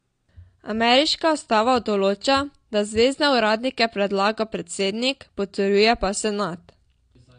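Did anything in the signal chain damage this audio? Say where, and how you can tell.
Yes, at the codec stage: throughout this speech the spectrogram stops dead at 9.7 kHz, with smeared, warbly sibilants, pointing likely to AAC compression near 32 kbps.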